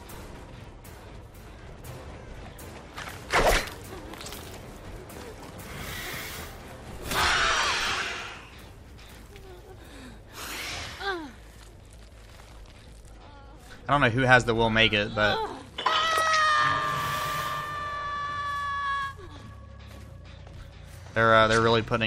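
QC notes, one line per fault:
Nothing stood out on listening.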